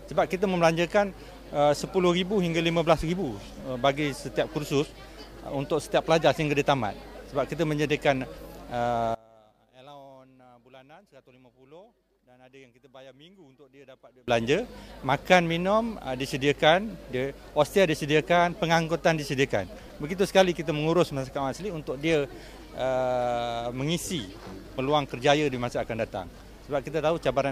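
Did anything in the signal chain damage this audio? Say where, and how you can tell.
Yes. Between 9.15 and 14.28 s the sound suddenly drops by about 27 dB to a faint copy, with nearly everything, background included, almost gone, then returns to full level. The likely cause is one channel inverted somewhere in the analogue wiring, such as a swapped conductor on one leg. With one side's polarity reversed, anything shared by both channels cancels when they are summed, leaving only the faint difference between them.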